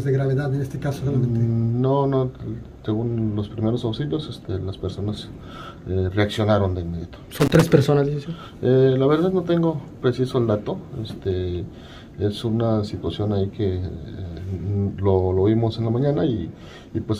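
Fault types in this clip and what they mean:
Loose connector crackle: a short, ragged burst of scratchy crackle from about 7.40 to 7.62 s, roughly a fifth of a second. That's what you get when a worn or grubby contact keeps making and breaking, chopping the signal into little pops.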